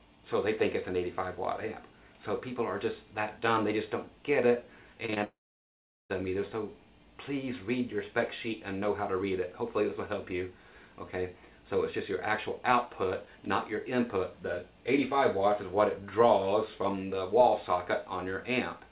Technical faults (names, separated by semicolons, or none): short concealed packet loss; long network dropout